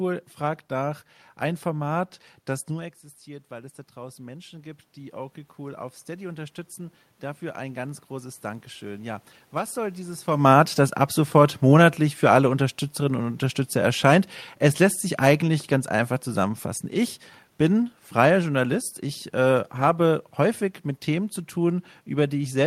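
Automatic gain rising runs from 2.70 to 10.28 s in this speech recording: just before it, at about 2.5 s, the talker moves away and the level at the microphone drops by about 14 dB. The gain control reads the input as too quiet and climbs about 12 dB over nearly eight seconds. Because it boosts everything it receives, the room noise swells along with the voice, and the level never fully returns to where it was. Automatic gain falling follows from 10.31 to 15.71 s, ending just before "einfach zusammenfassen". Around 10.0 s the talker moves again while the gain is still raised. The control then backs off about 4 dB across roughly five seconds, and voice and background sink together as the gain settles.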